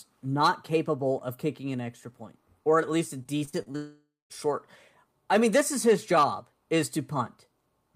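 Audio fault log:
3.23–3.76 s, repeated packet loss (robotic sound): Right after "or at least a", the speech breaks up into six short holes. The longest is about 36 ms, and together they cover about 160 ms. Each hole is bridged by stretching the preceding sound, so roughly 28% of this half-second is synthetic fill. The fill repeats the last fragment, which gives a choppy texture with pieces missing.
3.76–4.32 s, long network dropout: About 540 ms of speech is missing, and the stretch is filled with substitute sound. At first the last sound is carried on as a buzzy continuation that fades out. For about 180 ms of the span nothing is heard at all. Speech then resumes further along, with the missing portion skipped rather than delayed. This is likely an interruption in delivery long enough that concealment gave up.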